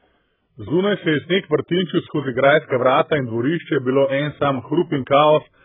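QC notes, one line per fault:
Throughout: AAC compression. The speech is dull and smeared, with nothing above 3.8 kHz, so consonants lose their edge and sibilants sound fizzy and warbling. The damage is heavy, which fits AAC-LC at a very low rate, around 8 kbps. Starved of bits, the encoder likely lowered its cut-off and quantised the remaining frequency lines so coarsely that bands collapse into holes or substitute noise, blurring detail across each frame.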